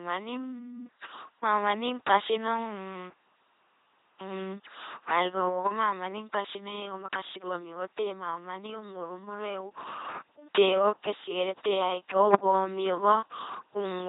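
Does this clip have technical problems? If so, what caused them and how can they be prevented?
Yes. The speech passes through an LPC-10 vocoder throughout. Each moment is rebuilt as pure buzz or pure hiss through a ten-pole filter. The result is heavily damaged and robotic. Nothing remains above 3.8 kHz, which fits a 2.4 kbit/s coder. To prevent this, use a modern wideband codec at a higher bitrate.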